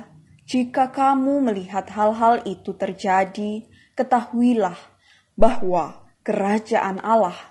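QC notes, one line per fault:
Throughout: low-delay AAC compression, likely AAC-ELD at around 32 kbps. The speech sounds rough and grainy, with noise filling the gaps between harmonics and a thin, synthetic top band. Its short frames resolve pitch poorly, which sets it apart from ordinary AAC's pre-echo smearing.
5.41 to 5.89 s: phantom power thump. A supply switching on a live input sends a voltage step through the coupling capacitors, heard as a deep thud that decays within about 108 ms. It is low and has no body, unlike a handling bump or plosive pop.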